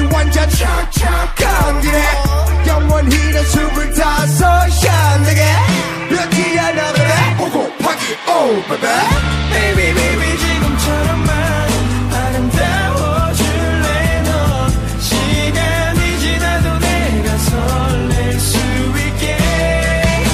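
No dropouts, clicks, distortion, level jumps or other technical faults can be heard anywhere in the recording.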